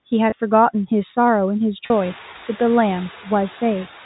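Throughout, the background noise dips between phrases and swells under them, a sign of noise suppressor artifacts cutting steady noise by only about 4 dB. At 0.30 to 0.32 s, a brief held, buzzy tone bridges a 20 ms gap. This is packet loss with pitch repetition, which fits one lost packet, with the last pitch period repeated to fill it. At 1.86 to 1.90 s, the same buzzy hold lasts twice as long, about 40 ms, which points to two consecutive lost packets concealed the same way, just before the room noise rises by roughly 18 dB around 2 s.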